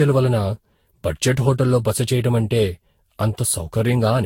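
From start to finish the speech carries a swirly, hollow, smeared quality, with consonant attacks blurred and nothing above 16.7 kHz. That is generation loss, most likely from re-encoding around seven times through a lossy codec, which fits chained Vorbis passes near 63 kbit/s. Each pass requantises on a shifted frame grid, so holes and noise compound. A single low-bitrate encode would sound thinner but cleaner; here the smearing exceeds what that bitrate explains.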